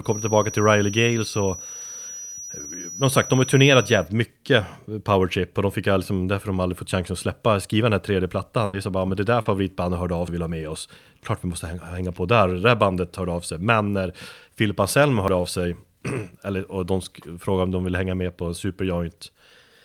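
It's a speech clip, and the first thing you notice is a feedback whistle, a thin single-pitch tone at 5.8 kHz sitting about 15 dB under the speech from the start to 4.08 s, likely the speaker-to-mic loop hovering right at the edge of howling without taking off. At 8.65 to 8.75 s, between "skriva den här tredje" and "är så bara men", there's a burst of packet loss. The receiver stretches the last sound out for 80 ms and fades it, then jumps ahead past 80 ms of missing audio. Short concealed packet loss shows up twice, at 9.41 to 9.47 s (40 ms, between "bara men det där" and "hörde av") and at 15.41 to 15.45 s (20 ms). Each time the decoder papers over the gap with a brief smeared fill before blending back in. Then there are two dropped buffers (overrun), heard as jumps where the audio skips straight ahead with no silence, likely because the software didn't read the buffer before the hardware overwrote it. 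The first is at 10.28 s, between "hörde av" and "och vill ha med", losing around a tenth of a second, and the second is at 15.28 s, losing around 40 ms.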